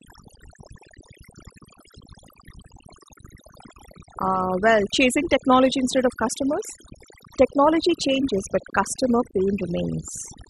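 Overdone noise removal runs through the entire speech recording. A noise reduction stage set far too aggressively is pulling individual frequency bands down whenever they sit near its noise estimate, taking the quieter parts of the voice along with the noise. Between phrases the background drops to near silence dotted with twinkling specks. A spectrogram shows scattered isolated blobs in the gaps and ragged, patchy harmonics in the speech.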